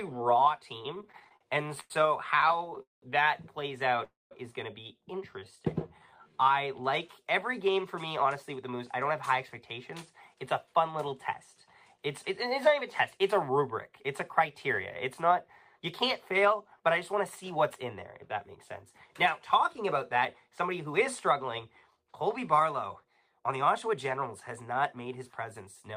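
From 0.95 to 3.04 s the audio drags and catches, halting in short bursts where the last sound is held and then resumes. These are repeated stalls (stutter): 22 separate gaps, the longest about 199 ms, together adding 525 ms of filled-in sound, roughly a quarter of that stretch. Packets kept arriving late, so the jitter buffer repeatedly ran dry and the receiver stretched the previous sound to cover each wait. Nothing is lost, only delayed.

At 4.04 s the sound sticks, the held sound trailing off into silence for about 180 ms, and at 4.33 s the audio carries on exactly where it left off. This is a call audio freeze lasting 270 ms, and it shifts everything after it 270 ms later. The likely cause is a hold-up in packet delivery that emptied the jitter buffer. The receiver bridged the wait with decaying filler, then continued once data arrived.

Between 5.39 and 6.53 s the audio slows to about 85% of normal speed while the pitch stays put, so sounds feel drawn out. 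This is a jitter buffer slow-down. With its reserve running low, the receiver repeated individual pitch cycles and slivers of quieter passages many times over, inserting 177 ms in total to rebuild a safety margin before the buffer could run dry again.

From 8.24 s to the end of the clip the audio runs a touch fast, at about 103% of normal speed, again with no change in pitch. This is a jitter buffer speed-up. The buffer was holding more audio than it wanted, so the receiver trimmed tiny slices, each one or a few pitch cycles long, again and again. Across that stretch roughly half a second is taken out.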